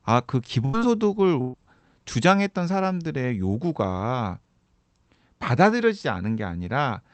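Speech that twice stalls briefly: from 0.65 to 0.75 s, and again from 1.41 to 1.55 s, the sound just before each point is stretched into a fading smear, then the audio jumps ahead. Each is a burst of packet loss. Consecutive packets went missing, about 80 ms the first time and 120 ms the second. The receiver filled each gap by extending and attenuating the last received audio, so that stretch of speech is lost.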